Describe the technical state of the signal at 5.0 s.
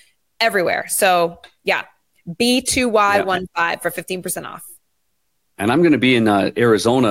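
At 5.0 s the speech signal is intact, with no dropout, clipping, distortion or other audible fault at that point.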